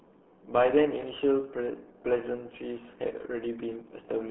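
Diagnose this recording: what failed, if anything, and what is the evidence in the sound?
The codec stage failed: the speech carries RealAudio 14.4 codec damage from start to finish. It sounds muffled and gargly, with the band held to roughly 300 Hz to 3.4 kHz and nothing above 3.7 kHz. A spectrogram would show a hard ceiling at about 3.7 kHz with empty space above and smeared, blurry harmonics below. The damage is heavy, which fits a dial-up-era speech coder squeezing the signal into about 8 kbit/s.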